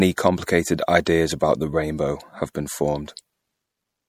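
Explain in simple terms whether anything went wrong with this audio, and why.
Throughout the speech there's a watery, swirly texture, and s sounds come out a bit metallic and chirpy. That's MP3 compression, likely squeezed hard enough that the encoder throws away weaker detail, which then flickers in and out from one moment to the next.

At about 1.05 s there's a quick hiss just ahead of a sharp onset, and the attack itself sounds softened. That's pre-echo: the codec spreads its noise over a whole chunk of sound, so noise sized for the loud part leaks into the quiet instant before it.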